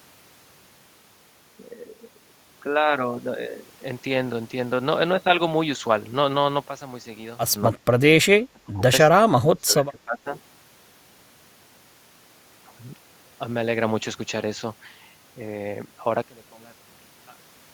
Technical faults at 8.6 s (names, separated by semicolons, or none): speech suppressed in double talk